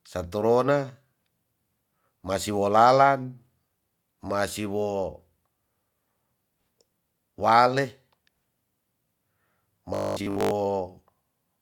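Speech, with one fault: from 9.95 to 10.51 s, new audio likely arrived too late, so a short buffer of about 20 ms was replayed over and over in place of most of the real signal. The result is robotic sound from repeated short buffers, a rigid, metallic 50 Hz buzz that only loosely follows the speech.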